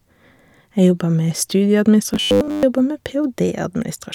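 From 2.14 s to 2.63 s the speech collapses into a rigid, metallic buzz pinned at 100 Hz, still loosely tracing the shape of the speech. This is robotic sound from repeated short buffers, likely caused by audio arriving too late, so the playback loops the last 10 ms chunk to fill the gap. That loop sets the 100 Hz buzz, and for most of this stretch the real audio is skipped in favour of the repeats.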